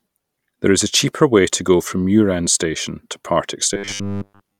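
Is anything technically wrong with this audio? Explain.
Yes. From 3.74 to 4.60 s the speech turns into robotic sound from repeated short buffers, a rigid metallic buzz at 100 Hz. Likely, about seven tenths of the audio there is 10 ms blocks replayed in place of skipped material. A spectrogram shows even horizontal lines every 100 Hz, and the waveform shows identical repeating 10 ms segments.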